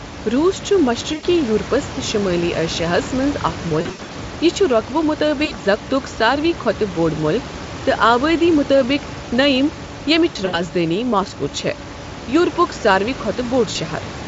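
Speech with brief buzzy, smeared dropouts that fade and stay weak at 1.13–1.25, 3.81–4.12, 5.45–5.55, 10.29–10.6 and 13.71–13.77 s: VoIP packet loss concealed by the speech codec, where the decoder extrapolates missing audio (about 40–200 ms, scattered at 3.81 and 10.29 s) with falling gain.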